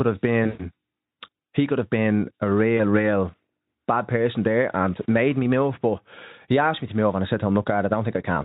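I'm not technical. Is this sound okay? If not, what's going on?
No. There are two spots of VoIP packet loss concealed by the speech codec. Bits of the call went missing, so the decoder kept stretching the last sound it had, fading it out. It happens from 0.44 to 0.69 s and briefly at 2.77 to 2.81 s.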